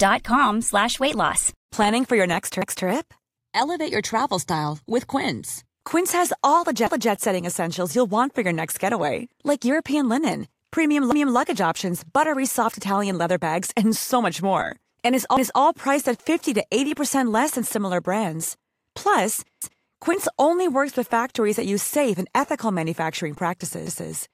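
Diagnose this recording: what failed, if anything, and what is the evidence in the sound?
The speech stutters three times: a quarter-second of sound plays twice at 2.62–2.87 s, 11.12–11.37 s and 19.62–19.87 s. These are overlapping chunks at the buffering stage. Each block began 250 ms before the previous one ended, which fits 4-second chunks.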